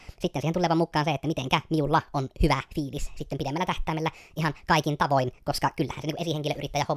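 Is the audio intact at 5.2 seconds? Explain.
No. A wrong sample rate runs throughout, including 5.2 s: speech plays 1.45 times fast and about 6.45 semitones high, which fits 22 kHz material played at 32 kHz.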